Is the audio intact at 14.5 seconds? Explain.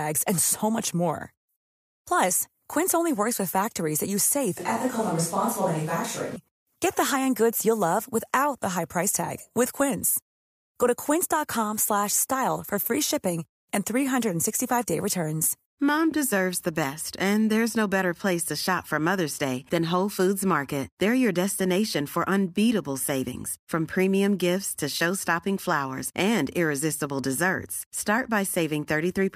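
Yes, the speech at 14.5 seconds comes through intact, with no dropout, click, distortion or other fault at that point.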